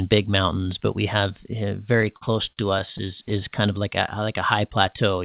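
From 2.02 to 3.32 s the speech drags and stutters in repeated stalls, nine short hitches lasting up to 44 ms each, in sound already limited to 4 kHz by the call codec. Packets arrived late, the jitter buffer kept running empty, and the receiver stretched the last sound to bridge each wait, so almost nothing is lost.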